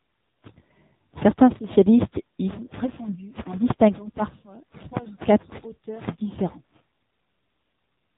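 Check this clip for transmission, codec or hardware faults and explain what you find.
The whole clip carries AMR narrowband mobile codec damage, plainly audible from start to finish. All of the speech is band-limited to telephone width, with nothing above 4 kHz, and it has a buzzy, synthetic edge. That harshness fits one of AMR-NB's lower modes, around 7.4 kbps. At that rate the codec rebuilds each 20 ms frame from a vocal-tract filter excited by only a few pulses, so fine detail is lost. On a spectrogram the energy stops at a hard ceiling near 4 kHz, and the harmonics look smeared and blocky from frame to frame.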